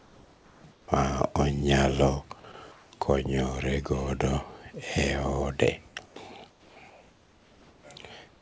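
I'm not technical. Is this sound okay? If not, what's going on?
No. Two things stand out, and both most likely come from how a call app handles pauses.

The first is comfort noise in place of the background. In the gaps between speech, the real room sound is swapped for a plain, even hiss. It happens from the start to 0.88 s, from 2.52 to 2.92 s, from 5.88 to 6.16 s, from 6.50 to 7.84 s, and from 8.28 s to the end. In that last gap, the fake hiss is about as loud as the real background. It just sounds flatter and emptier.

The second is sound dropped by the voice detector, at 2.52 s. For a split second, a bit of the speech itself is cut and replaced by that same hiss. The sender's detector seems to have mistaken a bit of speech for background and stopped sending. The gap is very short, so it may come across as a tiny clip in the speech rather than a clear hole.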